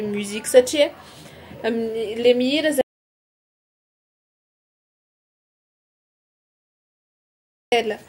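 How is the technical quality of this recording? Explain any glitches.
The recording has one major glitch: an audio dropout to silence that removes most of the second half of the speech. From 2.81 s to 7.72 s, about 4.9 s, the signal cuts out abruptly in mid-flow and the gap is silent, with no room tone or background hiss. That total absence of noise floor points to the input being lost while the recorder kept writing silence, likely from a disconnected device, a failed link or an accidental mute. The speech then resumes just as abruptly, and whatever was said during the gap is not recoverable.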